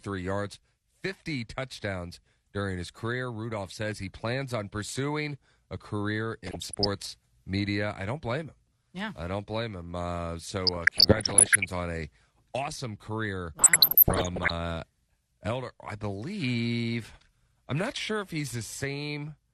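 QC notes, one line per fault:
throughout, MP2 compression: dull, granular speech with gurgling as upper sub-bands switch off and coarse quantisation remains, likely a starved MPEG Layer II encode near 80 kbps.
6.46–6.87 s, 10.67–11.65 s, 13.59–14.50 s, DAB burbling: bursts of noise blips in single sub-bands as bit errors corrupt sub-band samples and scale factors, worsening from light to heavier error rates.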